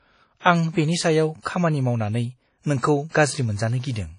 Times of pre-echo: 1.42-1.45

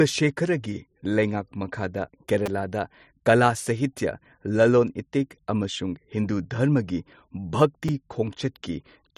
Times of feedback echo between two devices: none

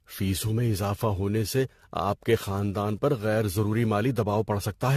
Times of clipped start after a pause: none

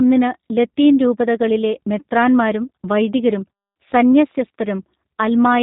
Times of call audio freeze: none

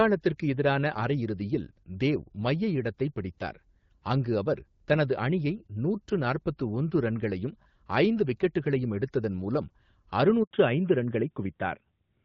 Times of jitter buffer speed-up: none

